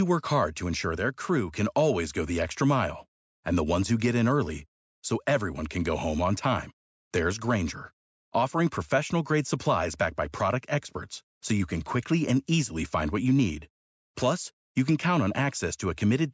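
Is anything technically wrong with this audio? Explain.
No, nothing's wrong here: the speech just carries the usual signature of a call's microphone processing, with the lowest bass trimmed away and nothing above 8 kHz, which is exactly how that path is meant to sound.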